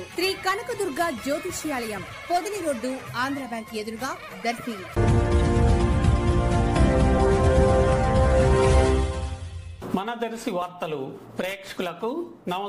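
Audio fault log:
4.58 s, 7.18 s and 10.62 s: dropped buffer (overrun). Each is a jump where the sound lurches forward with no gap, skipping about 20 ms, nearer 40 ms at 7.18 s. This is likely the hardware overwriting samples before the program read them, splicing the two sides together.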